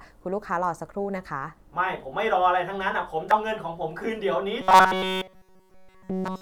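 Damaged data in a compressed stream at 3.31 s: the decoder misreads a corrupted frame and loses sync, producing a brief glitch in the speech.

Robotic sound from repeated short buffers from 4.61 s to 6.41 s: the speech becomes a rigid metallic buzz at 188 Hz, likely from the software repeating a roughly 5 ms buffer throughout while fresh audio is skipped.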